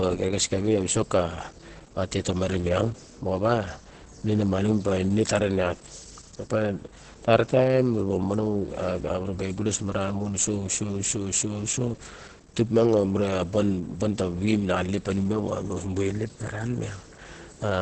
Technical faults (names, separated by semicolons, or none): Opus compression; clock slip clicks